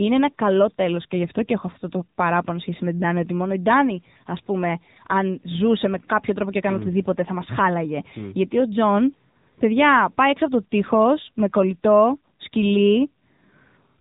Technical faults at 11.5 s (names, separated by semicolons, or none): AMR narrowband mobile codec